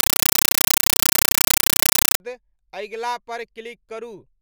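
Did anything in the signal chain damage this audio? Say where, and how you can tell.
Yes. At the playback stage, a compressed stream was played as audio: an undecoded Dolby Digital bitstream was passed as ordinary samples. From 0.0 to 2.20 s, loud chattering static replaces the speech as 8 ms noise bursts repeating 31.25 times a second, which fits AC-3 frames.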